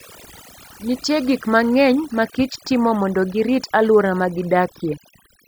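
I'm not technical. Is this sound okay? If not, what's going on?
No, it isn't quite right. This speech has overdone noise removal running from start to finish. A cleanup tool was pushed too hard, so the background drops and breaks up into twinkling specks, and softer parts of the voice get stripped away.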